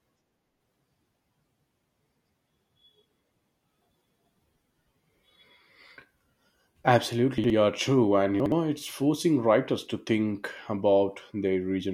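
A brief garbled jumble at 7.38 s and again at 8.4 s: chunks out of order, each 60 ms chunk playing one chunk late.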